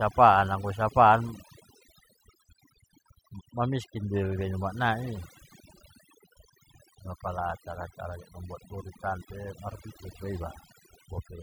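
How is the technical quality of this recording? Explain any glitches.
The recording suffers from overdone noise removal, present throughout. A noise reducer was pushed too hard. It cuts frequency bands near its noise estimate, taking quiet speech detail too. The background in gaps between phrases drops and breaks up into twinkling specks.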